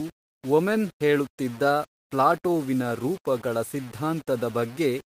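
Grainy distortion that tracks the speech runs from start to finish, with quiet passages turning gritty and sputtering. It likely comes from low bit depth without dither, a 6-bit signal rounded to coarse steps, leaving noise roughly 25 dB below the speech. Throughout, the pacing feels faintly uneven, because of clock drift between sender and receiver: the sender's clock runs about 3 percent slow, so the receiver's buffer keeps draining. From 0.02 s to the end, repeated timing corrections keep repeating short pieces to stay in step. The audio plays at about 97 percent speed and gains around 150 ms in total, heard as small, irregular hiccups.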